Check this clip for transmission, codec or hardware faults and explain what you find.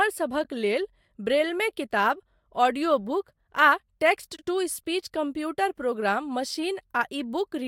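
Two spots of frames out of order, at 0.43 to 0.50 s and 4.36 to 4.46 s. Neighbouring runs of frames, likely four each, got decoded in swapped order, so each short stretch of speech plays with its halves exchanged: a garbled flutter, and nothing lost.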